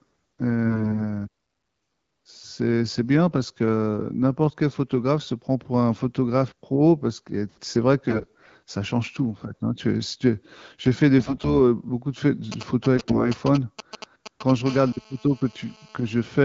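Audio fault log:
0.65–1.04 s, 8.07–8.50 s, 11.18–11.55 s and 12.97–13.27 s: AMR bit errors. In each stretch the speech keeps roughly its pitch and loudness but turns hoarse, scratchy and gargly. The weak-protection bits of the AMR-WB frames were corrupted while the checksum on the core bits still passed, so the decoder accepted them. Excitation pulses then land in the wrong positions, and the fine pitch, gain and spectral-envelope values drift. The roughness suggests error rates of a few to around ten percent. The surrounding clean speech fits light coding damage at a mid wideband rate.
12.52–14.51 s: GSM signalling bursts. A galloping dit-dit-dit of short raspy 217 Hz buzzes sits about 10 dB below the speech and overlaps the last stretch of bit errors. A nearby 2G handset transmitting only intermittent groups of TDMA bursts, as it does while signalling, is being rectified by the audio circuitry. 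Each group of radio pulses is demodulated into a brief burst of the 217 Hz frame rate, and the irregular spacing between groups produces the galloping rhythm.
14.66–16.40 s: GSM phone buzz. A continuous, hard, raspy buzz at 217 Hz with a dense series of harmonics runs about 22 dB below the speech and has no relation to it. A 2G phone in an active call transmits one burst every TDMA frame, 217 times a second, and the audio circuitry rectifies the RF envelope. The sharp-edged pulses this produces account for the buzzy, harmonic-rich timbre, and the steady level indicates the call state.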